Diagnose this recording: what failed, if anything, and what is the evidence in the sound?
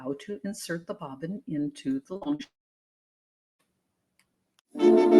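Call processing: a speech-tuned noise suppressor was left running throughout. It treats held sound and tails as noise and ducks them a few dB, so the audio pumps and thins.

Network: repeated packet loss from 2.13 to 2.41 s. Short holes up to 42 ms are patched by stretching the last sound, concealing about 43% of the span, so it turns choppy and robotic.

From 2.43 to 3.61 s the last sound carries on briefly and fades, then goes silent for about 1.08 s before returning with that stretch missing. That's likely a long network dropout.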